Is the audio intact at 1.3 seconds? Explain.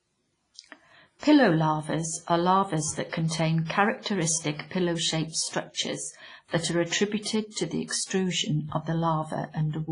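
No. At 1.3 seconds, as across the whole clip, the speech rings and washes with breathing hiss and nothing above 10.1 kHz, likely WMA compression at a heavy, roughly 24 kbps-like setting. Long transform blocks smear quantisation noise over tens of milliseconds, unlike a clean low-pass, which only dulls the sound.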